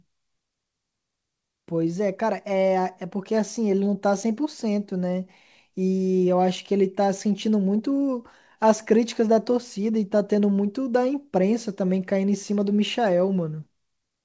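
No faults; the speech arrives over a call path whose wideband codec leaves nothing above 8 kHz, which fits G.722.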